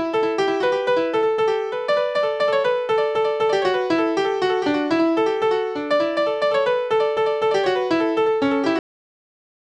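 From the start there's a doubled audio track: a second full-band copy trails about a second behind, maybe 5 dB down and completely dry, likely a slower capture path recording it twice. Then at 8.79 s you get a cut-off end, where the sound stops mid-event and drops straight to digital silence, because the final buffers never made it out.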